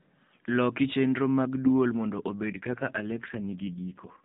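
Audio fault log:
2.50–4.24 s AMR rate drop: after "chenro mag dwol mondo" the speech turns buzzy and synthetic with no gap or band change, consistent with a fall from 12.2 to 4.75 kbps.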